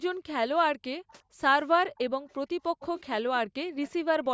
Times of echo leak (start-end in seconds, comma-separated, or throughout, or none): 1.09-1.13, 1.96-3.02, 3.83-3.91